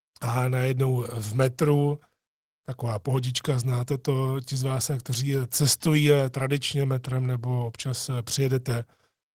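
Speech clip with no audible faults.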